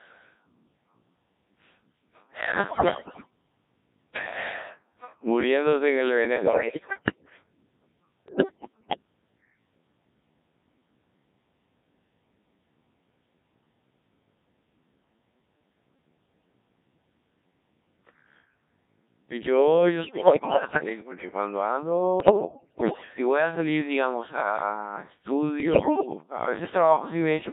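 Throughout, the speech carries the robotic, buzzy texture of the Codec 2 vocoder, which fits its 1.3 kbit/s mode: voice is resynthesised from pitch and envelope, heavily damaged. Bit errors on digital voice radio, with something like one bit in five to ten flipped, make the synthetic voice lurch in pitch and level, warbling into gibberish at 2.68–3.30 s, 6.36–7.30 s, 8.28–9.02 s, 20.04–20.89 s, 22.20–23.14 s and 25.60–26.06 s.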